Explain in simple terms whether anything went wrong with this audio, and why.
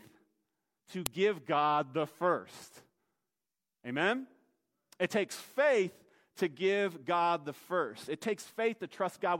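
At 1.06 s there is a sharp, loud snap: a file header played as audio, where leftover file information at a joined piece was played back as sound.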